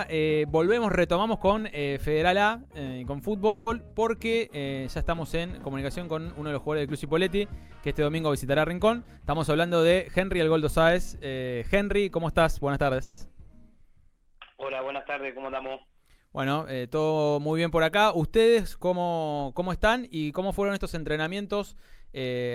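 At 3.47 s the sound stalls for about 0.2 s, a call audio freeze. On the waveform the last sound carries on as a fading buzz or hiss, with smeared, thinning partials on the spectrogram. The likely cause is packets held up in transit that left the jitter buffer empty. When they arrive, playback resumes where it stopped, so about 190 ms of delay is inserted and nothing is lost. The same thing happens at 13.03 s, filling about 140 ms.

From 9.03 to 10.35 s a jitter buffer speed-up plays the audio at 114% speed with the pitch unchanged. The receiver is draining surplus buffered audio by cutting out short pitch-period slices one after another, about 200 ms in total. The spectrogram shows events closer together while the harmonic spacing stays the same, and the passage sounds hurried. A second speed-up runs from 18.91 to 20.23 s at 111%, removing about 150 ms.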